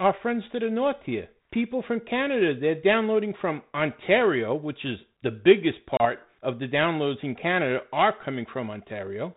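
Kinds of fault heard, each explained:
Packet loss on an ADPCM call: at 5.97 s a gap of about 30 ms drops out, a hard-edged hole filled with silence, roughly three packets' worth. The trouble continues past it: the decoder's predictor and step size no longer match the sender's, so as the speech comes back on "of the downloads in" it arrives with a bit of distortion, settling by about 6.06 s. The 32 kbit/s G.726 underneath only adds light coding grit.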